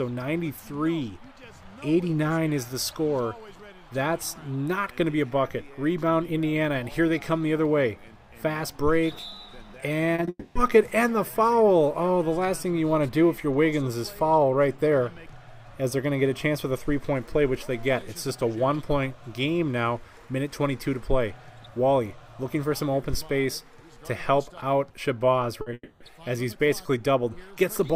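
Around 10.15 to 10.19 s, again at 10.20 s, and at 10.25 to 10.28 s there's a cluster of short concealed packet loss. Chunks of 30, 10 and 20 ms got patched by the receiver stretching out the last sound, so you hear a quick smear and wobble rather than clean audio.

Right after that, from 10.29 to 10.56 s, comes a long network dropout. That held-over sound drags on as a fading buzz or hiss for about 260 ms, ending in roughly 40 ms of near-silence before the audio picks up again with that stretch gone. The same thing happens at 25.73 to 26.01 s, about 270 ms of fading fill ending in 40 ms of quiet. Both are most likely the stream stalling completely for a moment.

Just before that second one, at 25.61 to 25.67 s, there's a burst of packet loss. About 50 ms went missing in one go, heard as a held, dimming buzz or hiss that jumps ahead when real audio resumes. It's followed by another brief concealed loss at 25.70 to 25.72 s, a 10 ms smear leading straight into the dropout.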